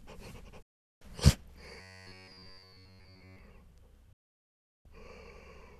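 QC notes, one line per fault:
0.62 to 1.02 s and 4.13 to 4.86 s, digital broadcast dropout: the sound cuts to silence almost instantly, with a fade of about 3 ms, and picks up again later with the audio in between simply gone, about 384 ms in the first hole and 720 ms in the second. The receiver muted while frames were missing or failed their check, which fits runs of 24 ms frames being dropped.
1.81 to 3.39 s, robotic sound from repeated short buffers: the sound turns into a rigid, metallic buzz pitched at 93.8 Hz that still loosely tracks the underlying audio's shape. The likely cause is audio arriving too seldom, so the player keeps looping the last slice of about 10.7 ms, whose repeat rate sets that fixed pitch, while most of the real audio, roughly two-thirds or more, is skipped.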